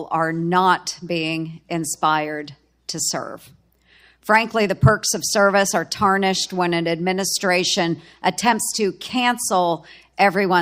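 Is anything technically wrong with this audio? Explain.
No, nothing technically wrong.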